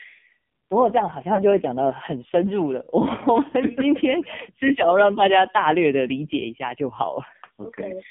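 Throughout, the speech passes through an AMR narrowband mobile codec. Only about 150 Hz to 3.6 kHz survives. The heavy buzzy, synthetic tone points to a low AMR-NB mode near 5.9 kbps, where few pulses drive the vocal tract model.

At 1.36 to 1.43 s and again at 3.50 to 3.54 s, there are lost AMR speech frames, one 20 ms frame each time. The decoder repeats the last pitch and vocal tract settings at lower gain. Each is heard as a brief dip or warble.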